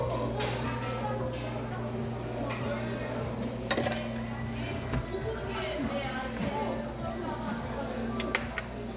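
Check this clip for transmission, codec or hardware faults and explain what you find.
Nothing in this everyday-sounds clip points to a transmission, codec or hardware problem, so there's nothing to flag here.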